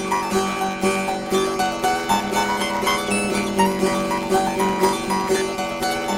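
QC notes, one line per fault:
Throughout: planar audio read as interleaved. Each 10.67 ms block plays twice sped up, giving a robotic 93.8 Hz buzz, not a clear octave rise.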